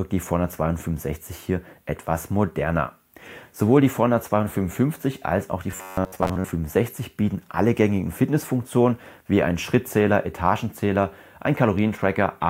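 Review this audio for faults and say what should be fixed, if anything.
Robotic sound from repeated short buffers, 5.71–6.53 s: a rigid metallic buzz at 94 Hz, likely from a roughly 10.7 ms block replayed most of the time. The spectrogram shows rigid, evenly spaced harmonic lines, and the waveform shows identical repeating cycles. Fix it by enlarging the playback buffer or adding a proper packet-loss concealment so audio arrives in time and gaps aren't filled by looping.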